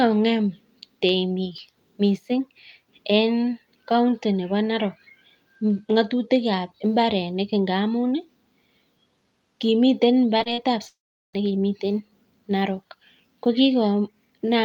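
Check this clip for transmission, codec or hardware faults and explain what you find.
Two transmission faults are audible, both in a short burst near 10 to 11 seconds of the speech.

Short concealed packet loss occurs three times: 10.37 to 10.41 s, 10.43 to 10.48 s, and 10.54 to 10.59 s. The first two gaps are about 20 ms each. The third is about 40 ms. Each time, audio failed to reach the decoder in time. The receiver bridged the hole by extending the preceding sound, then blended back into the real signal. The result is a quick smear or wobble.

From 10.87 to 11.35 s the sound breaks off for almost half a second. The last sound carries on briefly as a fading buzz or hiss. Then about 0.38 s of silence follows. The speech resumes afterwards, with the missing stretch simply gone. The likely cause is a long network dropout. Nothing arrived for about 460 ms. Concealment covered the first part, then gave way to silence.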